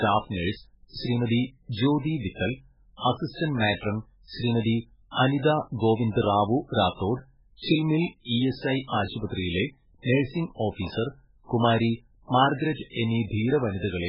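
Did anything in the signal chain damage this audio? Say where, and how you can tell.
Yes. The speech has heavy codec damage throughout. It sounds watery and swirly, and nothing survives above 5.3 kHz. This is likely MP3 compression at a very low bitrate, around 8 kbps. Starved of bits, the encoder drops weak frequency lines frame by frame and cuts the treble.

There are loud pops at 8.94 to 9.02 s, a quick pair, and one at 10.87 to 10.89 s. Each peaks about 10 dB above the speech, which carries on underneath. The likely cause is a sudden voltage step or pulse from a plug, switch, static or driver glitch.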